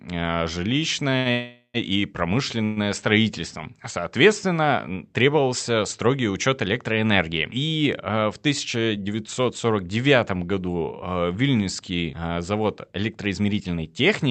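At 1.10 to 1.15 s and again at 1.18 to 1.28 s there are two short stalls from a late packet. Each time a packet failed to arrive on schedule, the jitter buffer emptied, and the receiver held the last sound for about 15 ms and then 78 ms before continuing from the same point. Nothing is lost. A sound is simply drawn out with a faint buzz. Unlike a freeze, it stays short and never fades away.

Right after, from 1.31 to 1.77 s, comes a call audio freeze, with a second one at 2.64 to 2.79 s. The likely cause is packets held up in transit, which drained the jitter buffer. The first freeze fills about 429 ms: the last sound continues as a buzz that decays, ending in about 70 ms of silence before the audio resumes where it stopped. The second fills 121 ms and does not go silent. Their length and fading tail are what separate these from the brief stalls.

After "а в", from 8.77 to 9.64 s, and again from 13.10 s to the end, there is a jitter buffer speed-up. 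The buffer had grown past its target, so the receiver cut out pitch-period-sized slices in rapid succession. This removed roughly a tenth of a second in the first stretch and about 150 ms in the second. The sound runs about 112% fast and feels hurried, with pitch unchanged. That steady pitch is what separates it from a simple playback-rate error. The Opus call path limits the audio bandwidth to 8 kHz.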